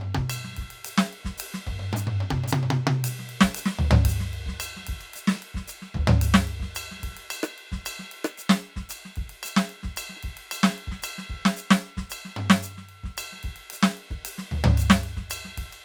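Listening to the music, nothing stood out as a technical problem at any point.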